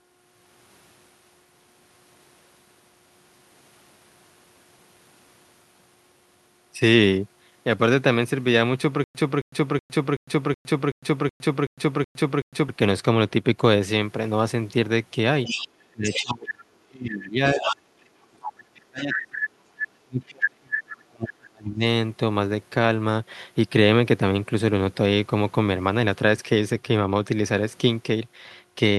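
From 9.04 to 12.69 s there is a stutter with silent gaps. A 0.27 s fragment repeats ten times, each followed by about 0.11 s of dead silence, giving an even 0.38 s pulse. The likely cause is a stalled stream replaying its last buffer. The exact repetition and true digital silence set it apart from ordinary dropouts.

At 15.45 s, 16.06 s and 17.57 s, the other side's voice is leaking through in brief scraps. They sit roughly 10 dB below the talker, and the last one is only about 5 dB below. The likely cause is loudspeaker echo that the canceller missed. This is a second voice, not a gap or a loss.

From 15.92 to 19.61 s and 19.84 to 21.83 s, speech is suppressed in double talk. The talker's voice dips, at worst by around 35 dB, for about 3 s and 2 s. The likely cause is an echo canceller attenuating everything while both sides talk at once. Unlike the stutter, nothing repeats.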